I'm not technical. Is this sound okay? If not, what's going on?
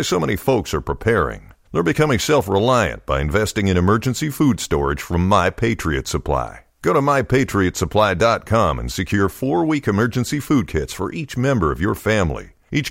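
Yes, nothing in this speech recording points to a technical problem, and the signal holds steady throughout.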